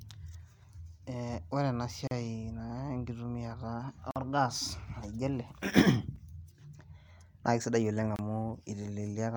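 Hard-edged silent holes interrupt the speech at 2.07 to 2.11 s, 4.11 to 4.16 s, 6.16 s and 8.16 to 8.19 s. This is a gap between stream segments: the timestamps of consecutive 2-second segments leave a small hole, which the player fills with silence. The holes last 38, 47, 4 and 27 ms. Unlike a dropout, nothing is missing. The speech resumes exactly where it stopped, just slightly delayed, and the breaks recur on a regular two-second rhythm.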